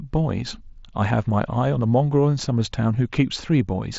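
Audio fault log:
No fault to log for this audio.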